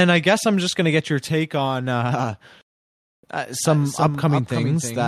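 At 3.65 s a doubled audio track starts abruptly and runs to the end of the clip. A second copy of the same speech follows about 300 ms behind, roughly 5 dB quieter than the original. It is full-band and dry, with no decay or room colour. That separates it from a natural echo. Syllables smear into a stuttering double. The likely cause is the signal being captured twice, once through a slower path.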